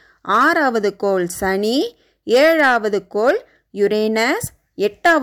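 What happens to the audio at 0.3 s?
At 0.3 s the speech runs into hard clipping until about 0.77 s. It is driven roughly 3 dB past the ceiling, so the peaks are sliced flat, adding a crackly edge. The waveform shows squared-off tops, and the spectrogram shows smeared energy reaching high frequencies.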